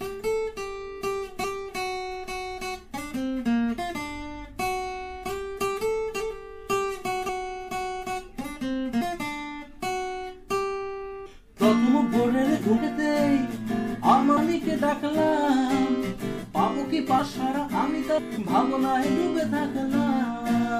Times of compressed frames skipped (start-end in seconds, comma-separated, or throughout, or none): 1.43, 7.28, 9.00, 11.25, 12.76, 14.36, 17.18, 18.17